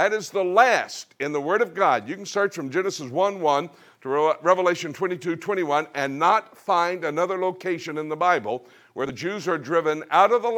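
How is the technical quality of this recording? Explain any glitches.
There's one glitch, near the end. From about 9.01 to 9.10 s you get compressed frames skipped: a few whole frames of the encoded audio never got played, either because they were missing from the file or because the decoder threw them out as damaged. Playback jumps ahead by roughly 70 ms of audio, so a short chunk just vanishes. At the join you'd hear either a brief smeared blip or a hard click, depending on how the codec stitches frames together.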